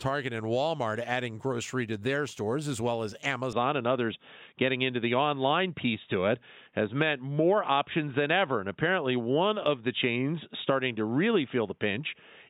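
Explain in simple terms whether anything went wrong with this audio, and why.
Right after "stores as well as", at 3.53 s, the sound suddenly turns dull and boxy and stays that way to the end. Nothing above 3.8 kHz remains, the level shifts noticeably, and a faint new background noise appears. This is likely an input switched to a poorer device mid-recording.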